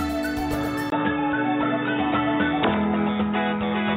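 Input switched to a poorer device at 0.90 s, likely a change to another microphone or a headset profile. After a 20 ms gap, the sound turns dull and boxy, with nothing above 3.7 kHz and a faint new background hiss, while the level stays about the same.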